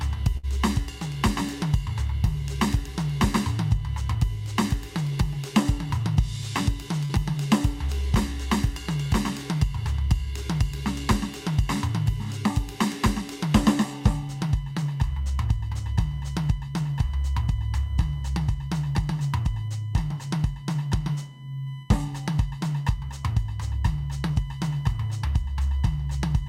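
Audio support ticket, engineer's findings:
USB whine, whole clip: fixed tone at 1 kHz with harmonics, strongest at 3 kHz, about 30 dB under the music. Likely USB frame-rate current leaking via power or ground. Spectrogram: steady horizontal lines at 1 kHz multiples.

Burst of packet loss, 0.37 to 0.45 s: music held, then fading, then resuming about 60 ms further on. The receiver extrapolated the last sound across the lost packets. Waveform: decaying repeated cycle; spectrogram: smeared, darkening band, abrupt restart.

Short concealed packet loss, 7.05 to 7.11 s: brief smear and wobble in the music, about 40 ms filled in. The decoder continued the preceding sound, then blended back. Spectrogram: short blurred patch with smoothed harmonics; waveform: smooth blend back at the rejoin.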